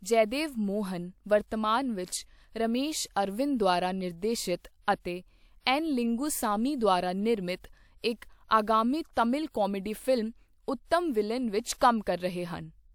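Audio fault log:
5.60–5.66 s, 9.13–9.17 s, 9.49–9.54 s and 11.78–11.81 s: pre-echo. Before each sharp speech onset, a short hiss rises for about 37 to 59 ms, and the attack itself sounds softened. The transform codec spread quantisation noise sized for the loud onset across its whole block, including the quiet stretch before it. Unlike reverberation or echo, which trail after a sound, this smear arrives ahead of the attack.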